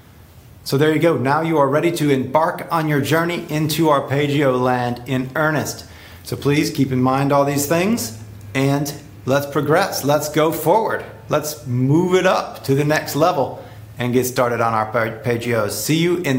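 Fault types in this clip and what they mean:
No audible faults are present.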